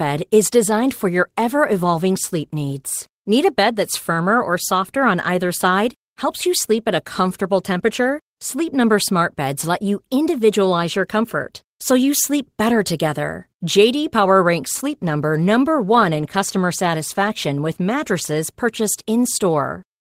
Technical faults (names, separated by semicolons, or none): none